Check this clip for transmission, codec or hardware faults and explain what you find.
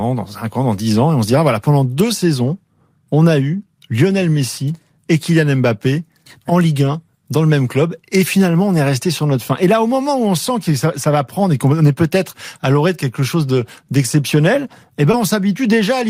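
One transmission fault appears, near the very end of the speech. Between 15.11 and 15.15 s there is short concealed packet loss: about 20 ms of audio never arrived in time, and the receiver filled the gap by extending the preceding sound, continuing its pitch if voiced or substituting shaped noise if not, before crossfading back into the real signal. It is heard as a brief smear or wobble. On a spectrogram that sliver looks like a smooth continuation of the sound just before it.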